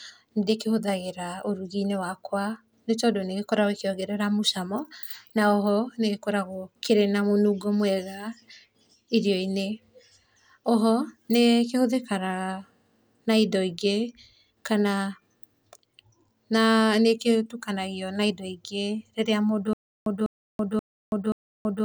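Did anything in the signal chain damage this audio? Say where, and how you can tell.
Yes. From 19.73 s to the end, the speech breaks into a stutter with silent gaps: a 200 ms fragment repeats four times, each followed by about 330 ms of digital silence, every 0.53 s. This is likely a playback or stream stall that kept replaying its last buffer. The fixed period and true silence distinguish it from random network dropouts.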